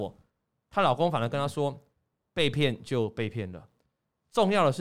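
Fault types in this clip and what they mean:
No technical faults detected in the speech recording; nothing to list.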